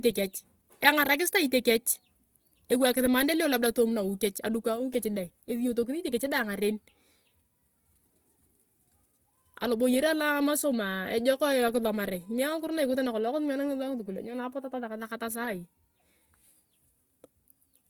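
From start to finish the speech carries a grainy, rough texture, with a plainly audible noisy fizz riding on the voiced sounds. The top end still reaches about 20.2 kHz, so nothing sounds muffled, just coarse. That points to Opus compression, likely in its music mode at a low rate around 24 kbps: with too few bits, bands get filled with folded or noise-like content, so harmonics come out hashy instead of clean.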